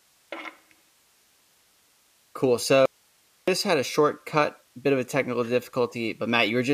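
At 2.86 s the speech cuts out abruptly. This is an audio dropout to a faint residue. For about 0.62 s, until 3.48 s, only hiss remains, sitting roughly 40 dB below the speech. The signal returns just as suddenly on "had a shortcut bit". The likely cause is a brief loss of the wanted signal while the path downstream stayed live, so its own noise fills the gap. Neither edge is faded.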